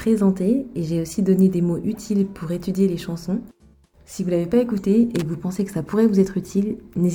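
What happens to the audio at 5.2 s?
Right around there you get a short burst of loose connector crackle, running from about 5.16 to 5.22 s, so roughly 65 ms. That's the classic sign of a worn or dirty contact shifting: the connection rapidly makes and breaks, chopping the signal into fragments, and any DC sitting on the line turns those breaks into little pops. The result is a brief, irregular scratchy crackle laid over the sound.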